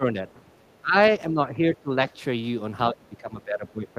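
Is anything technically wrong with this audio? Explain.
Yes. Speech suppressed in double talk appears at 0 to 0.25 s, 0.57 to 0.62 s, 0.82 to 0.96 s, 1.31 to 1.9 s, and from 2.9 s to the end. The likely cause is an echo canceller that could not separate the near talker from loudspeaker echo while both sides spoke, so it turned the whole signal down. The speech dips by around 10 to 15 dB in short stretches, losing its high end or cutting out in pieces rather than staying steady.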